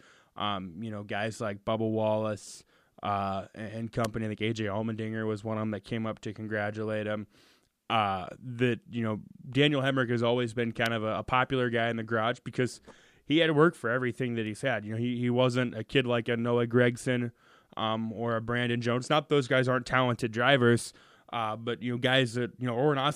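At 4.04 s and again at 10.86 s a sharp, dry snap cuts across the speech, each one over in a few milliseconds and peaking fairly hot, around -15 dBFS. Both have the character of an electrical switching spike, likely a nearby switch, relay or static discharge arcing briefly and coupling into the audio line, adding an instant transient on top of the recording rather than disturbing the speech itself.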